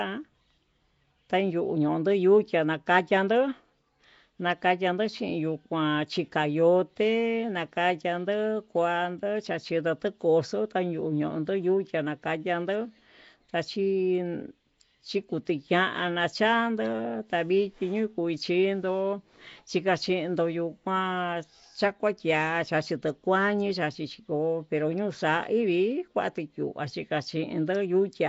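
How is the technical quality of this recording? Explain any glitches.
The recording is held back by one fault that runs through the whole clip. Nellymoser compression, throughout: the speech carries a rough, hissy halo and a smeared, underwater quality, with nothing above 7.7 kHz. The likely cause is Flash's Nellymoser Asao codec at a low rate, consistent with about 32 kbps. It codes short fixed blocks at a tight bit budget, leaves weak bands unfunded and fills them with noise.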